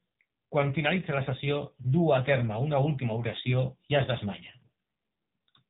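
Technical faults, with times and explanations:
Throughout, AMR narrowband mobile codec. Nothing above 4 kHz survives. The speech is heavily buzzy and synthetic, which fits a low AMR-NB mode near 6.7 kbps.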